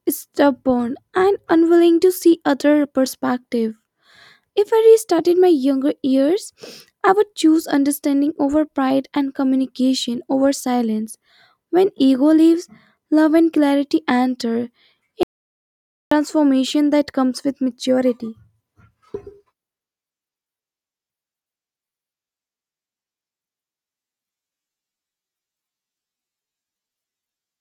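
At 15.23 s the speech cuts off abruptly and the track falls to silence until 16.11 s, a gap of about 0.88 s. This is an audio dropout to silence. The room tone vanishes along with the speech, so the gap is silent, not a quiet passage. The likely cause is a brief loss of the input signal while recording continued, and whatever was spoken in that interval is not recoverable.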